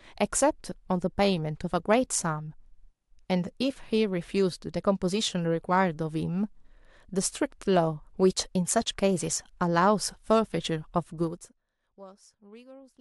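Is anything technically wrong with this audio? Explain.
Yes, there's zipper noise from 11.21 to 11.63 s: the speech is pulled down about 25 dB in unsmoothed 1 dB steps, around 70 a second, so each step clicks and you hear a fast ticking.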